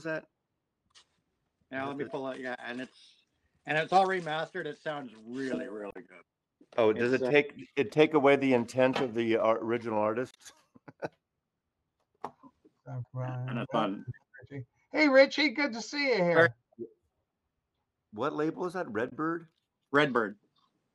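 Three brief glitches cut into the audio at 5.90–5.96 s, 10.31–10.36 s and 19.08–19.13 s, each lasting about 40–60 ms. They're the signature of damaged data in a compressed stream. Bytes in the encoded file were lost or overwritten, so the decoder misread those frames, lost sync and had to hunt for the next valid frame header. That's why each one comes out as a short, unnatural blip.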